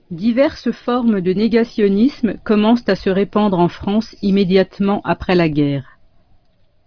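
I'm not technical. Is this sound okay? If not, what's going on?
Yes, it sounds fine; nothing here needs fixing.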